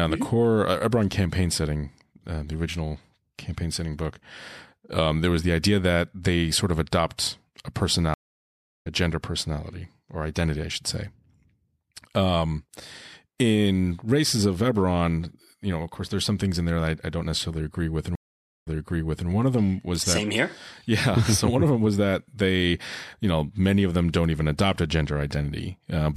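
At 8.14 s, right after "sort of adopt a", there's a stream reconnect: about 0.71 s of dead air, then the speech picks up at "gender personality or identity", something under half a second further on. At 18.15 s, after "don't necessarily agree with", another 0.51 s dropout; this time the resend jumps back 0.63 s, so a bit repeats before "one of them was".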